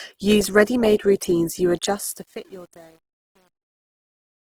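Opus compression is audible throughout the speech: the encoder keeps the energy in every band but fills starved bands with folded or noise-like content, so the voice sounds grainy and rough rather than swirly. The sound is most likely Opus music (CELT) mode at a rate near 16 kbps, with content still reaching about 20.4 kHz. Truncation distortion on a fade starts at 1.78 s, just after "routines you", and is worst from 2.15 s to 4.45 s. The smooth fade-out from 1.78 s to 4.45 s passes through a stage that keeps too few bits, which fits about 9-bit resolution, and adds no dither. The quiet tail therefore turns into coarse steps that sound gritty.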